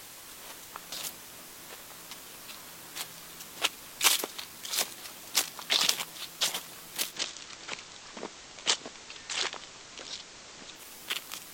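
A constant, even hiss sits under the whole recording with no accompanying distortion: low bit depth with dither, consistent with an 8-bit signal, leaving noise roughly 10 dB below the sound. From 7.05 s to 10.86 s, digital radio blending to analogue takes over. The receiver cross-fades in about 0.12 s to the FM broadcast and back, extra hiss appears about 20 dB down, and the level stays unchanged.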